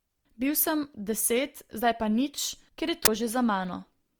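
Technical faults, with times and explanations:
Throughout, generation loss: the speech sounds swirly, smeared and hollow, with blurred attacks, likely from being encoded about three times with Opus at 48 kbit/s, each pass adding fresh quantisation noise.
3.05–3.08 s, uninitialised buffer: just after "ker je", a 23 ms burst of digital noise as leftover memory is played as audio, which fits a 1024-sample block.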